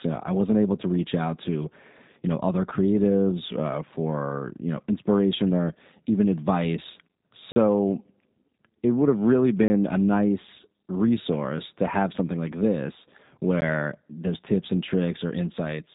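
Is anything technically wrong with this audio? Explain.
Yes, two kinds of fault are present.

Throughout, the speech has the rough, slightly synthetic quality of the G.729 codec, which fits an 8 kbit/s stream. This codec rebuilds each 10 ms frame from a vocal-tract filter, a pitch predictor and a few pulses, and discards everything above about 3.8 kHz. On a spectrogram, energy stops at a hard ceiling near 3.8 kHz.

There are also three blocks of digital silence: 7.52–7.56 s (40 ms), 9.68–9.70 s (20 ms) and 13.61 s. The sound cuts out abruptly with no fade, so the first two are heard as brief holes and the last, lasting under 15 ms, as a tick or dip. On the waveform these show as near-flat lines, and on the spectrogram as blank vertical strips.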